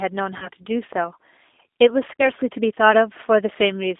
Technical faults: G.729 codec; VoIP packet loss concealed by the speech codec

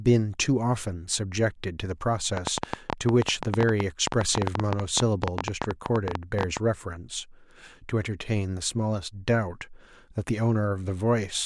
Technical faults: train of clicks

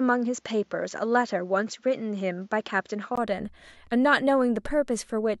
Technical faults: input switched to a poorer device

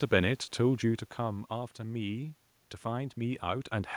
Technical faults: automatic gain rising

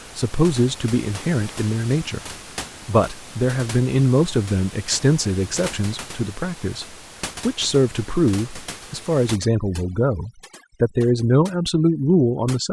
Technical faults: overdone noise removal

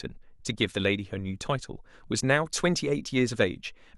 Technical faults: none

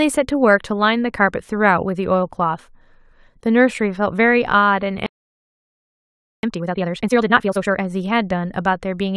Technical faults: playback stall; time-compressed catch-up

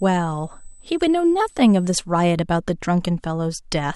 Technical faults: USB whine

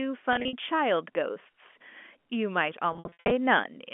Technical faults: packet loss with pitch repetition

